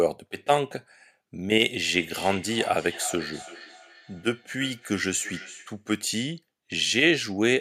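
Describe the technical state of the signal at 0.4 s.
At 0.4 s the signal is intact, with no audible dropout, distortion, noise burst or other technical fault at that moment.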